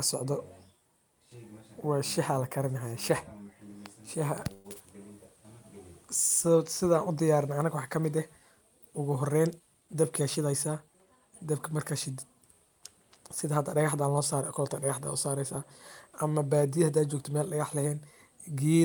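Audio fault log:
4.53 to 4.67 s, call audio freeze: for 112 ms the last sound is stretched into a fading buzzy hiss instead of breaking off. Packets were likely held up in transit, leaving the jitter buffer empty while the receiver kept extending what it had. Unlike a dropout, nothing is lost. When the sound resumes it picks up exactly where it paused, so the 112 ms is an inserted gap and everything after runs that much later.
9.47 to 10.95 s, jitter buffer speed-up: across these 1.5 seconds the speech runs at about 107% of normal speed, with about a tenth of a second cut out in total. The buffer had built up more audio than its target, so the receiver trimmed many short slices of one or a few pitch periods in quick succession. This differs from a resampling or playback-rate error because the pitch stays where it was. Only the pace changes, which makes this stretch sound slightly hurried.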